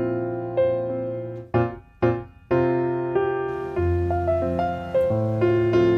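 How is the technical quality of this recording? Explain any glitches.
No glitches turn up anywhere in the recording. No dropouts, clicks or distortion interrupt the sound at any point.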